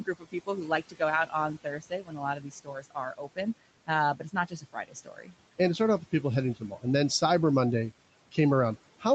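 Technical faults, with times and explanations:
Throughout: noise suppressor artifacts. The room noise, which sits about 19 dB below the speech, is pulled down by about 18 dB wherever the suppressor judges a band to be steady noise. This works frame by frame and band by band, so the background sinks in the gaps between words and comes back up under the speech. The result is a noise floor that pumps with the talker instead of staying constant.
0.00–0.48 s, 0.82–3.38 s, 3.87–5.34 s and 6.55–6.84 s: speech cut by the noise suppressor. In each range the suppressor mistook low-level parts of the speech for background and attenuated them along with the noise. The deepest drops are about 16, 17, 17 and 15 dB. Only fragments inside each range are hit, roughly a fifth of a second, a second, under a second, and about 0.15 s respectively. Soft consonants and word endings there come out swallowed or faint.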